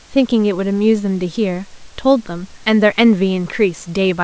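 No technical faults occur at any point in the speech, which comes through a G.722 call path at 64 kbps with nothing above 8 kHz and room noise sitting about 36 dB below it.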